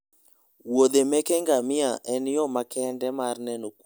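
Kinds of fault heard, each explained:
No technical faults heard.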